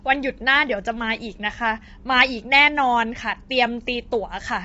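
Throughout the speech, the sound is rough and grainy, with plainly audible coding damage and nothing above 7.7 kHz. The likely cause is low-delay AAC compression (AAC-ELD) at a bitrate that fits roughly 24 kbps. Its short frames resolve pitch harmonics poorly, so noise fills the gaps between them. On a spectrogram, the harmonic stripes look smeared and speckled, and the energy stops at a flat ceiling at 7.7 kHz.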